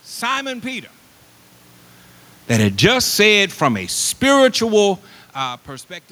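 Around 2.51 s the automatic gain control decides the input is too hot and starts pulling its gain down, dropping about 6 dB by 3.0 s. Because it's the gain stage moving and not the talker, the room noise sinks right along with the speech. That's your tell, since the talker's own shifts in distance near 1 s and 5 s only change the voice level and leave the room sound where it was.

Then it turns around. From about 2.91 s, overlapping the tail of that dip, the automatic gain control starts rising again, judging the level too quiet now, and brings things back up by about 3 dB through 3.65 s, just before "a spiritual". You hear voice and background swell together over most of a second. It's a slow pumping rise, with no jump and no click, and it settles about 3 dB below where the level sat before the dip.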